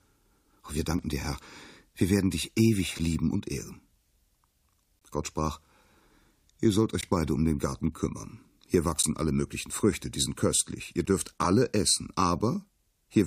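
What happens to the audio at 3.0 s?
A brief hard-edged dropout of about 8 ms at 2.99 s: a gap between stream segments, where mismatched timestamps at a 2-second segment boundary leave silence.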